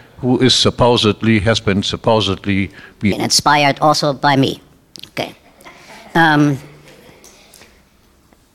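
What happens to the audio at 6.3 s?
At 6.3 s the audio is inside a section at the wrong speed, running from 3.12 s to the end. It plays 1.35 times faster than recorded, likely from a clock mismatch during editing or playback, so everything sounds hurried and roughly five semitones higher.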